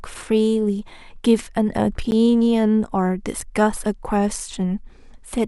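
At 2.11 s and again at 3.41 s the speech drops into a block of digital silence, 10 ms and then 5 ms of silence. The signal cuts out and back with no fade, so each gap comes across as a quick tick.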